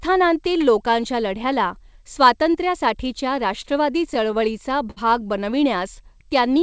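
Speech heard through a call path that carries nothing above 8 kHz, which fits a wideband codec such as G.722. Just after "लोकांच्या लढ्याला स्वातंत्र्यासाठीच्या", from 3.62 to 3.66 s, there is a short stall from a late packet. The jitter buffer ran dry, so the receiver held the last sound for about 18 ms until the packet arrived, then resumed from the same point. Nothing is lost, but that sound lingers and the timing slips by 18 ms. Between 4.14 and 4.98 s come repeated stalls, a stutter. Packets arrived late again and again, and the buffer emptied five times. Each gap was bridged by extending the preceding sound, 98 ms in total, or about 12% of that stretch, with the longest hold at 58 ms. No audio is missing, but the delivery drags and hitches.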